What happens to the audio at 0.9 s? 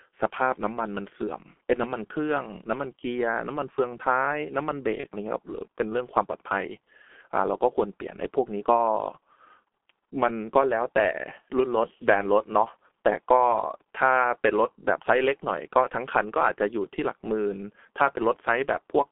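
At 0.9 s the speech carries G.723.1 codec damage, present throughout the clip. Heavy coding in 30 ms frames, consistent with roughly 6 kbit/s, leaves a muffled, hoarse voice with smeared consonants inside a 250 Hz to 3.5 kHz band, unlike clean band-limiting, which stays clear.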